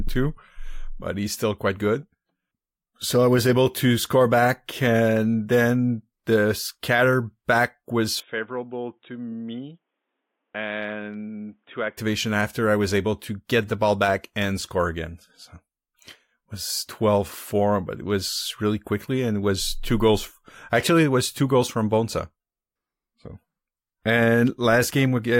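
From 8.2 s to 11.97 s the speech turns dull and boxy, with nothing above 3.8 kHz, drops in level by roughly 10 dB and gains a faint new background noise, then clears again. The likely cause is an input switched to a poorer device.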